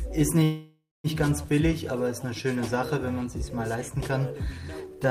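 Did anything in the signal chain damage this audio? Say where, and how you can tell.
Yes: a call audio freeze from 0.43 to 1.07 s, likely a network stall that emptied the jitter buffer; the held sound fades, ends in 0.22 s of silence, then resumes without loss.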